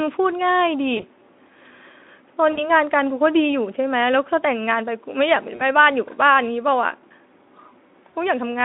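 VoIP packet loss concealed by the speech codec occurs at 0.97 to 1.03 s, 2.52 to 2.71 s, 5.55 to 5.62 s and 8.10 to 8.16 s, gaps that fit about 20, 60, 40 and 40 ms of missing audio. At each one the Speex decoder has no data, so it repeats its last pitch and spectral shape at falling gain. The speech stretches into a brief buzzy tone or coloured noise that fades, and stays weak for a moment after the stream returns, with the longest loss at 2.52 s.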